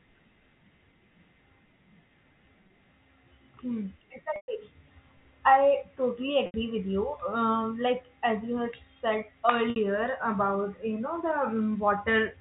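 Telephone speech, band-limited by G.711 coding, has packet loss with pitch repetition at 2.68–2.70, 4.36–4.48, 6.46–6.54 and 9.70–9.76 s. The gaps are bridged by a buzzy held pitch rather than the clean silence of a plain dropout, and the 120 ms gap fades toward silence.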